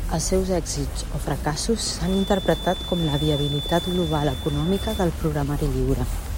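Feedback whistle, 1.99 to 5.12 s, after "seus èxits o fracassos": a single-pitch 3.5 kHz tone about 10 dB under the speech, slowly swelling and fading, likely a speaker-to-microphone loop held at the edge of feedback.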